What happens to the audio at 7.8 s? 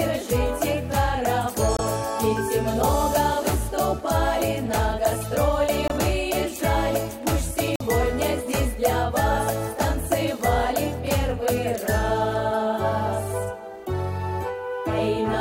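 At 7.75 s the audio drops abruptly into silence until 7.81 s. This is a corrupt frame muted fault: damaged compressed frames were rejected by the decoder and replaced with silence. The 64 ms gap fits four 16 ms frames, and timing afterward stays intact.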